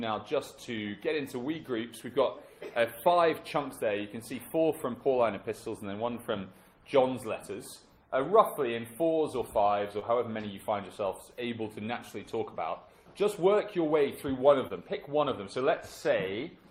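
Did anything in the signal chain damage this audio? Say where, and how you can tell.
Yes, the damage happened on the network. There are two spots of short concealed packet loss, at 9.99 to 10.03 s and at 14.67 to 14.82 s. Each one has a brief smear where about 20 ms of audio never arrived. The receiver's concealment patched each gap by carrying on the last sound and then blending back in. At the second spot it also dropped about 8 ms to catch up, so the timing jumps slightly there.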